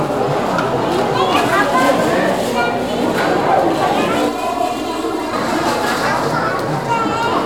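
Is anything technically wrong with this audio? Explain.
Yes. From 4.29 to 5.33 s the sound turns hollow and phasey, thinned out as if heard through a tube, and then returns to normal. This is channel delay (comb filtering). One channel arrives roughly 3 ms behind the other, and when the two are summed to mono the shared content cancels at a regular series of frequencies, starting somewhere near 150 Hz. Those fixed notches carve out the body of the sound and cause the hollow, phasey tone.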